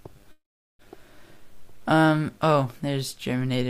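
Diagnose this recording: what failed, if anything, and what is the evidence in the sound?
From 0.31 to 0.82 s the sound stalls into a fading buzz or hiss, then silence, and resumes intact: a call audio freeze, likely from delayed network packets.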